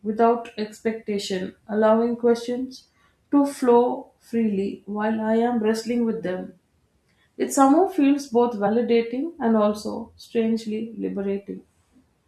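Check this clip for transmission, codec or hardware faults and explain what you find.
One codec fault stands out in this speech. Compressed frames skipped at 8.66 s, just after "somehow feels both": about three frames of roughly 21 ms each are lost, so around 70 ms of audio jumps ahead.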